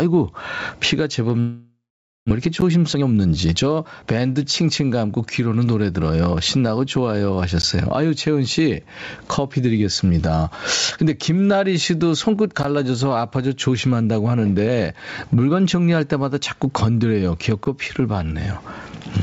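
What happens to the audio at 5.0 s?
At 5.0 s, as everywhere in the clip, there is gain pumping. The likely cause is an input gain set far too high, with a fast limiter or compressor clamping down on each loud sound. The level swings by around 20 dB, leaving a squashed, breathing sound. Through the G.722 call path, nothing is heard above 8 kHz.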